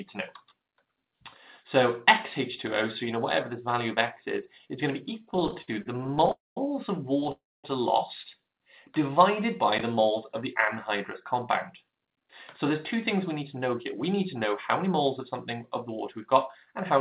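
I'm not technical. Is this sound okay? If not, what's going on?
No, not quite. From 5.2 to 7.3 s there are repeated stalls (stutter): the audio keeps catching for a split second, 28 tiny hitches, none longer than about 60 ms, because the data arrived late and the player briefly stretched the last bit of sound to cover each wait.

Inside that stretch, at 6.31 to 6.58 s, and again just after it at 7.32 to 7.66 s, there's a call audio freeze: the sound hangs, fades, then goes quiet for around a fifth of a second before picking up exactly where it left off. Those pauses likely come from data being held up on the way.

From 10.25 to 16.83 s there's a jitter buffer speed-up: the sound plays about 4% fast at the same pitch. The player is trimming tiny slivers, about a third of a second in total, to cut down the extra delay it had built up.

Throughout, the sound has that narrow phone-call quality, with nothing above 4 kHz.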